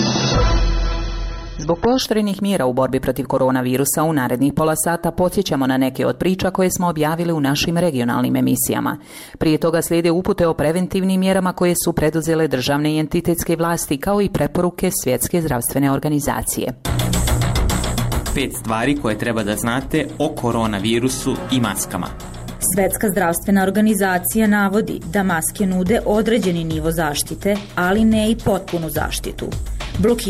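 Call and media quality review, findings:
Adaptive stream starting at a low bitrate, 0.0 to 2.0 s: top end missing, nothing above about 6.3 kHz, heavier codec smearing, then a clean jump in quality with no gap at 2.0 s. Player opening on a cheap rung, roughly 24 kbit/s AAC, before stepping up to about 96 kbit/s.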